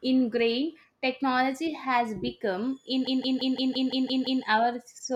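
From 3.07 s to 4.44 s the speech turns into a machine-gun stutter: a single 171 ms fragment repeats exactly, about eight times, at roughly 5.9 times per second. This is a system hang loop. The computer or audio driver stalled, and the sound hardware kept replaying the same ring buffer instead of receiving fresh audio. The loop length fits an 8192-sample buffer, long enough to hear the fragment's content rather than a buzz.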